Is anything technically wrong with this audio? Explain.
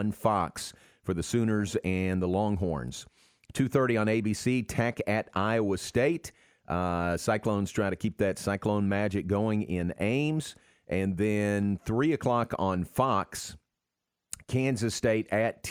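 No, nothing is technically wrong with this speech recording. Nothing in it points to a problem in how it was captured, processed or delivered.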